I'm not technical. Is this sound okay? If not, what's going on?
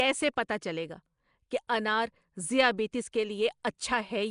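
No. Nellymoser compression, from start to finish: the speech has a rough, hissy haze and a smeared, underwater feel, and everything above about 10.6 kHz is missing. This is likely the old Flash microphone codec, which squeezes the sound so hard that quieter parts get replaced by noise.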